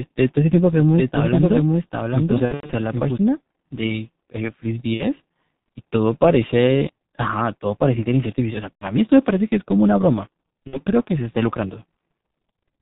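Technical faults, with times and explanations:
throughout: G.723.1 codec. The whole speech track has passed through this low-rate telephony coder at about 6.3 kbit/s, and the damage is heavy. Everything above 4 kHz is gone, so the sound is muffled, and the coarse 30 ms frames with a slowly updated voice model leave it hoarse, with smeared consonants. Unlike a simple low-pass filter, the roughness sits inside the voice itself and is there from start to finish.
0.80 to 3.18 s: doubled audio track. A second, full-band copy of the speech runs roughly 0.7 s behind the original, about 5 dB quieter. It enters and drops out abruptly, with no decay tail and no room colouring. A delay this long and this clean rules out reverb or a slapback effect. The likely cause is the same signal being picked up again through a slower path, or two offset copies left in an edit.
2.45 to 2.72 s, 4.94 to 5.04 s, 8.76 to 8.84 s, 10.67 to 10.79 s: VoIP packet loss concealed by the speech codec. 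In each of these spots packets went missing and the decoder filled the gap by carrying its last pitch and filter forward at falling gain, which stretches the sound into a brief buzzy tone or coloured noise that fades. The first event is the longest, with about 180 ms lost, scattered across 240 ms and with a longest run of about 90 ms. The other three lose about 60 ms each. Because the decoder rebuilds from its own guesses, the speech stays weak or distorted for a short while after the packets return. That lingering recovery is what separates these from clean dropouts or from hard clicks.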